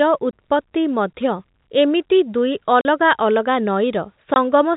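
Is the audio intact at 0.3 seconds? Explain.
No, packet loss filled with silence runs from 0.31 to 0.33 s: a 20 ms hole, consistent with two 10 ms packets, replaced by silence, with hard edges.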